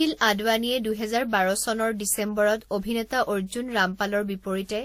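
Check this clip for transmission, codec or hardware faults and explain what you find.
One codec fault runs through the whole clip. Throughout, the speech shows transcoding between lossy codecs, likely a Vorbis encode near 48 kbit/s re-encoded as WMA near 64 kbit/s. The second coder wastes bits on the first coder's artefacts and adds its own, so the artefacts of both codecs are heard together. A spectrogram shows a hard ceiling at 16.4 kHz.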